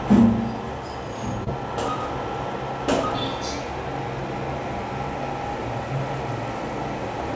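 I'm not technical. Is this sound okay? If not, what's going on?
No. At 1.44 to 1.48 s there is short concealed packet loss: a tiny piece of audio arrived too late, so the receiver patched it with guessed sound, heard as a brief smear.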